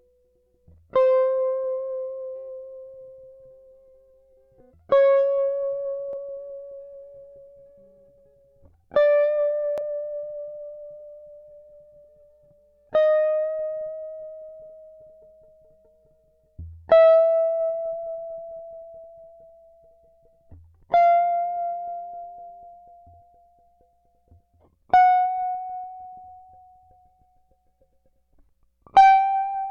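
At 6.13–6.16 s and again at 9.78–9.81 s the music hits a Bluetooth stutter. A lost packet of about 23 ms makes the receiver replay its last slice, giving a brief repeat.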